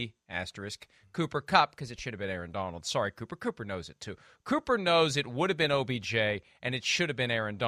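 From 1.52 to 2.14 s, just before "have been", the speech runs 5.5% fast and sits 92 cents sharp, nearly a semitone, before snapping back. Speed and pitch jump together in one step rather than wavering as wow would, so a drift correction step is likely.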